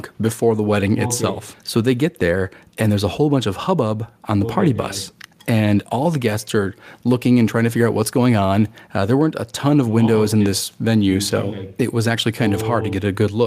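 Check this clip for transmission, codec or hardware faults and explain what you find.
Nothing faulty turns up anywhere in this speech recording.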